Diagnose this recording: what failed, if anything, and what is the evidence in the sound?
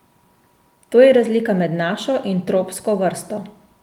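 Nothing failed: the speech signal runs as a continuous waveform throughout, with no audible breaks, distortion or processing faults at any stage of the chain.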